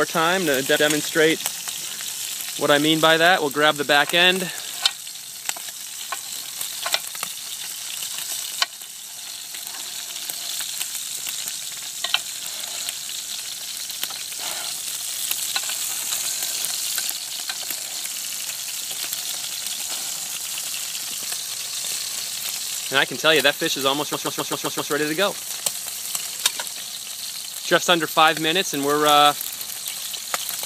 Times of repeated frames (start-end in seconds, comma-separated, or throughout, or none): 0.75-0.85, 11.72-11.82, 18.20-18.43, 24.13-24.91